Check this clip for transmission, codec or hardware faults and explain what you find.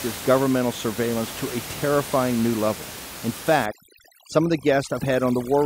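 One fault is present, overdone noise removal, from 3.66 s to the end at 5.65 s. An over-aggressive noise suppressor mutes individual frequency bands near its noise estimate, leaving near-silent gaps with twinkling specks. Room noise, about 13 dB below the speech, is part of the recording.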